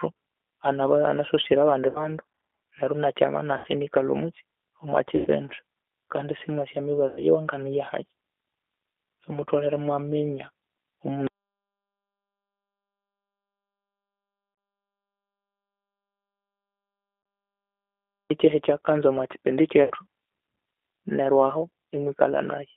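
Throughout, the speech carries the sound of the G.729 codec (the G.729A variant at 8 kbit/s). The encoder models each 10 ms frame as a vocal tract filter, a pitch predictor and a sparse set of pulses, so the voice sounds rough and slightly synthetic. The damage is plainly audible. The line band runs from about 300 Hz to 3.6 kHz, which leaves the sound thin, with no low body and no air above that range.

VoIP packet loss concealed by the speech codec appears first at 1.89–2.07 s, then at 3.58–3.68 s, 5.16–5.28 s and 7.08–7.24 s. The missing audio is 60 ms in the first two events and 90 ms in the next two, which fits 30 ms packets. At each gap the decoder keeps extending its last pitch and filter state at falling gain. The speech smears into a buzzy tone or coloured noise that fades, and the voice stays weak or distorted for tens of milliseconds or more after real packets resume.

From 11.27 s to 18.3 s there is an audio dropout to silence. 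The sound stops mid-flow and leaves about 7 seconds of silence with no room tone, so everything in that stretch is lost. The likely cause is a dropped input or link while recording continued. Two further 30 ms losses, at 14.55 s and 17.23 s, fall inside this silent gap.

The last concealment event is at 19.84–19.92 s. It covers 60 ms and produces the same fading smear of buzzy tone or coloured noise.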